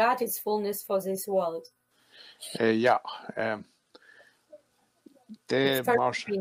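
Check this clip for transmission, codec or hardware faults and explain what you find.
One hardware-side fault is present: periodic USB or driver dropouts, from 0.87 s to 5.99 s, recurring every 1.02 s, around seven in all. A recurring stall on the bus or driver skips a tiny fraction of a millisecond of audio each time, heard as evenly spaced ticks.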